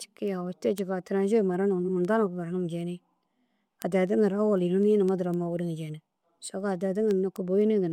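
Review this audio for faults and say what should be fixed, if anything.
Word clock ticks recur about every 0.3 s from 0.28 s to 7.87 s. An unlocked receiver slips one sample at each tick, and unlike random clicks, they keep a steady rhythm. To prevent them, lock the receiving device to the sender's clock or to a shared word clock.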